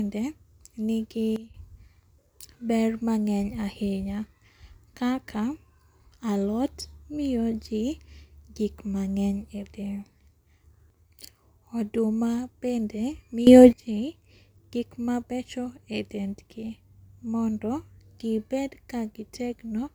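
A speech clip with two sudden gain jumps. At 1.36 s the level drops by about 13 dB, holding low until 1.54 s, and at 13.47 s it leaps up by about 16 dB through 13.73 s. Both times the speech and the background noise shift together in one step, with no fade, so the likely cause is a digital gain setting being changed instantly rather than ramped.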